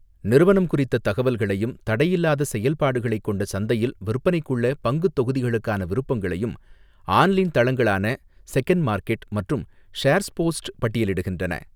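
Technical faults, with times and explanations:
No technical faults can be heard in this speech.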